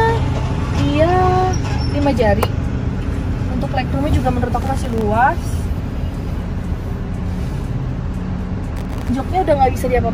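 From 4.62 to 5.01 s, and again from 8.77 to 9.10 s, processor overload crackle tears through the sound. The processor misses many tiny buffer deadlines in a row. Each miss drops a sliver of silence with hard edges. The very fine grit fits buffers under a millisecond long.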